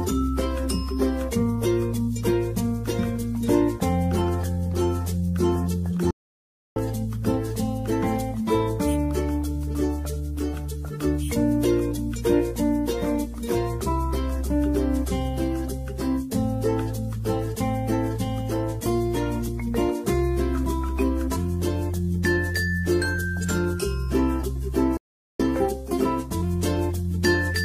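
At 6.11 s the sound just drops out mid-flow and stays silent for about 0.65 s, picking up again around 6.76 s. The same thing happens at 24.97 s, this time for roughly 0.42 s until 25.40 s. Both gaps sound like a playback stall, most likely the player starving for data or its thread getting blocked, so the output sits in silence until it recovers.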